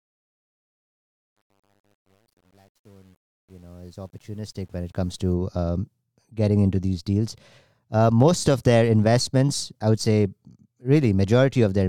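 From 0.0 to 5.34 s, the speech fade-in suffers truncation distortion on a fade. An undithered gain stage keeps too few bits, which fits about 9-bit resolution. Until 4.22 s the waveform shows square stair-steps and the sound is gritty, with broadband hash on a spectrogram. It clears before "um getting into these".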